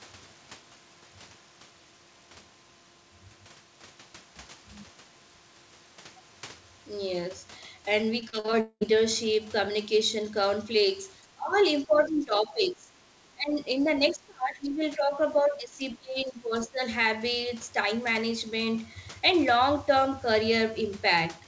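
Repeated packet loss (robotic sound) runs from 8.20 to 8.55 s. Five short holes open in the speech, the longest about 44 ms, and each is bridged by extending the last received sound. About a third of this stretch is patched rather than real, so the voice turns choppy, with fragments missing.

A long network dropout follows from 8.61 to 8.83 s. Roughly 0.2 s of audio likely never arrives. The receiver stretches the final sound into a fading buzz, which decays to about 60 ms of near-silence before speech resumes without the lost portion.

From 11.25 s the near-end speech is repeatedly pulled down in level, a pattern that points to speech suppressed in double talk, likely the echo canceller mistaking overlapping talk for echo and attenuating it. The dips fall at 11.25–11.57 s, 11.86–12.90 s, 13.34–13.59 s, 13.81–15.20 s and 15.41–16.81 s. They are about 15 dB deep in most spans, about 20 dB at 13.34 s and about 25 dB in the 13.81–15.20 s span, so the voice sounds ducked in patches.

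Throughout the clip the audio bandwidth ends at 8 kHz, consistent with G.722 at 64 kbps on the call path.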